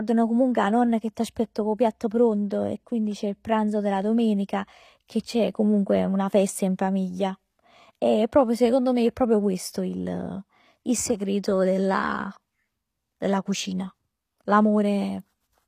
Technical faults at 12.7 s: HE-AAC compression

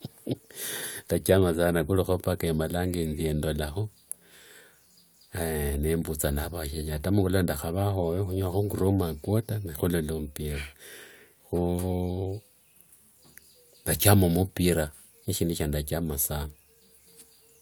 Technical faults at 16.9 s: none

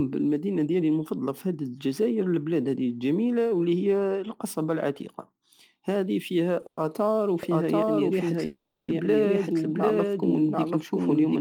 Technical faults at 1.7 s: none

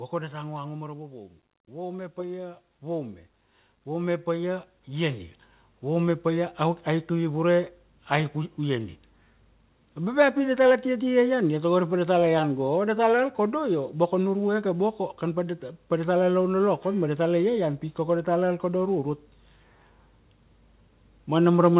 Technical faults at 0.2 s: automatic gain falling

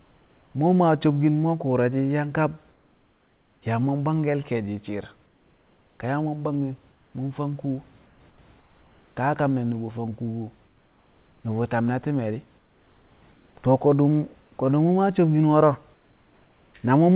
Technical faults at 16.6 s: comfort noise in place of the background

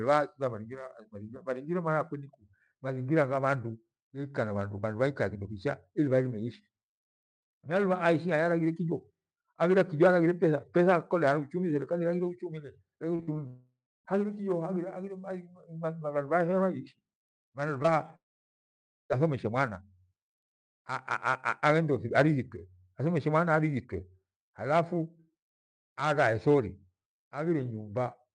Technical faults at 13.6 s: long network dropout

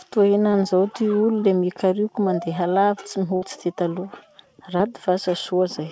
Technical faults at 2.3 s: none

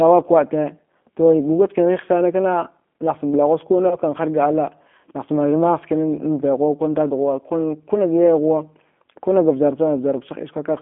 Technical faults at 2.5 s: G.729 codec

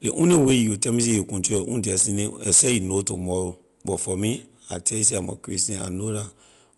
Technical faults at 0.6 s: Dolby Digital compression

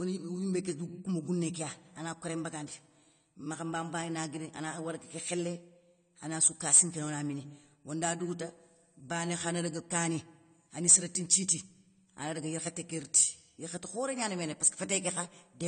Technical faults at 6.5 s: AAC compression

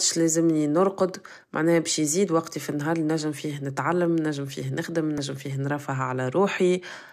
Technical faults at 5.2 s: damaged data in a compressed stream

